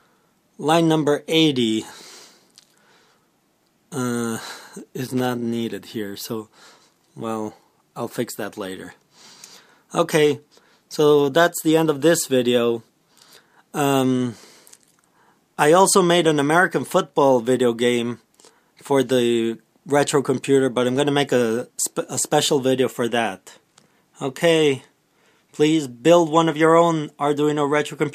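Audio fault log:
5.07–5.26 s, loose connector crackle: for about 0.18 s the sound breaks into an irregular burst of scratchy crackle, as a worn or dirty contact somewhere in the cable path rapidly makes and loses connection, chopping the signal on and off. On the waveform this shows as ragged dropouts and sharp spikes clustered in that short span; on the spectrogram, scattered broadband vertical streaks.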